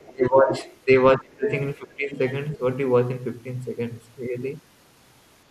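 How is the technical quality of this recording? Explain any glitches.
The technical quality is compromised by echo-control problems in the first 2.6 seconds of this speech.

Other side's voice leaking through occurs at 0.0 to 0.11 s, 0.49 to 0.77 s, 1.46 to 1.51 s and 2.53 to 2.58 s. A second voice sits under the talker. It ranges from about 30 dB below the speech to about 10 dB below at 1.46 s. The likely cause is far-end audio from a loudspeaker reaching the microphone and not being fully removed by the echo canceller.

Speech suppressed in double talk occurs at 0.1 to 0.54 s, 1.17 to 1.49 s, 1.76 to 2.2 s and 2.55 to 2.6 s. The talker's level dips sharply, by about 20 dB, about 35 dB at 1.17 s and only about 5 dB at 2.55 s. Both sides were likely talking at once, so the echo canceller turned everything down.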